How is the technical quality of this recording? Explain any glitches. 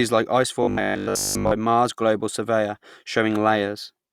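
The recording has one clear glitch. From 0.63 to 1.53 s the speech turns into a rigid, metallic buzz at 50 Hz. This is robotic sound from repeated short buffers, likely from a 20 ms buffer repeating through most of that stretch.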